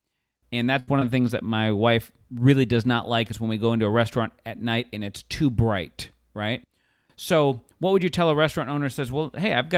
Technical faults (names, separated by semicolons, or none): burst of packet loss; lost packet rebuilt from error correction; short concealed packet loss